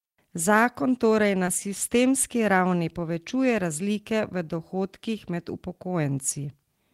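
A speech clip with one short concealed packet loss at 1.45 to 1.49 s, between "torej na" and "sistemski ravni povečuje razlike". About 20 ms never arrived. The decoder extended the preceding sound, leaving a brief smear.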